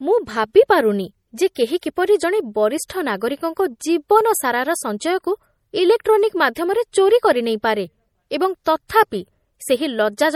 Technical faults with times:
0.00-10.36 MP3 compression
1.81 pre-echo
2.88 pre-echo
6.54 pre-echo
8.64-8.90 pre-echo

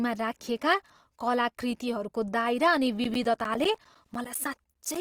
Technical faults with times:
0.00-5.01 Opus compression
3.04-4.96 periodic USB or driver dropouts

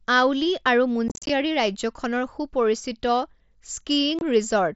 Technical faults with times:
1.08-1.30 unconcealed Bluetooth headset packet loss
4.19-4.21 unconcealed Bluetooth headset packet loss

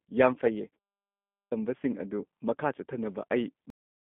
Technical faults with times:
0.00-4.15 G.729 codec
0.34-0.38 VoIP packet loss concealed by the speech codec
1.06-1.52 clipped start after a pause
3.70-4.15 cut-off end

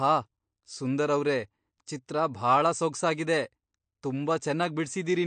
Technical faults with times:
0.00-5.26 MP3 compression

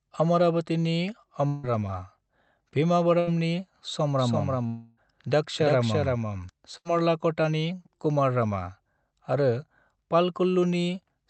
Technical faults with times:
1.47-1.65 long network dropout
3.19-3.29 burst of packet loss
4.19-6.49 doubled audio track
4.67-4.99 long network dropout
6.77-6.87 burst of packet loss

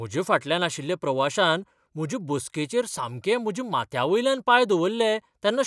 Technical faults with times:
none

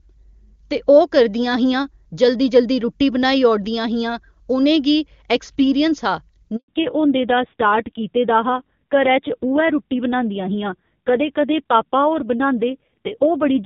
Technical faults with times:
6.56-6.68 handover gap
6.68-13.65 fallback to narrowband

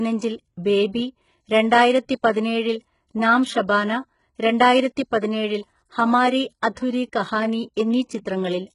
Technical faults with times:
0.00-8.75 HE-AAC compression

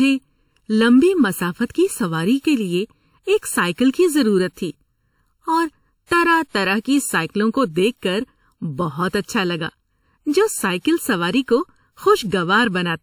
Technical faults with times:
0.00-13.03 channel delay (comb filtering)

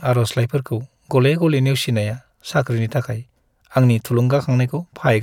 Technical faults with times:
none

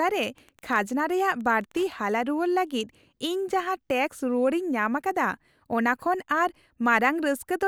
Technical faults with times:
0.00-2.00 Wi-Fi interference

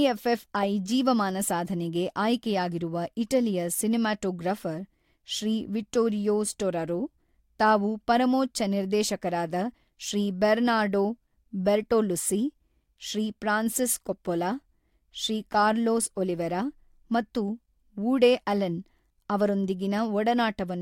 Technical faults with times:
none

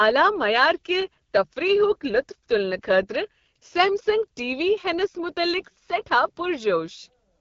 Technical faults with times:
0.00-7.40 AMR wideband (HD Voice) codec

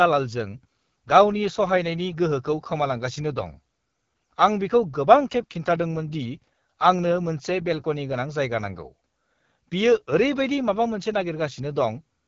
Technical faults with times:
0.00-12.27 AMR wideband (HD Voice) codec

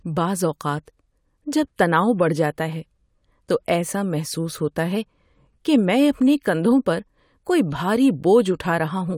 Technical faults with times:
none

